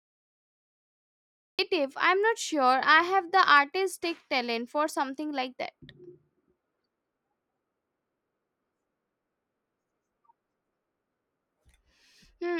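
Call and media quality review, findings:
Cut-off start: digital silence 0.00–1.59 s, then speech enters abruptly at 1.59 s already mid-sound, with no natural attack or onset. Probable component: capture or stream start logic. Mechanism: the recording began late, so the opening of the utterance was never captured and the first retained sample lands inside an ongoing sound rather than before it.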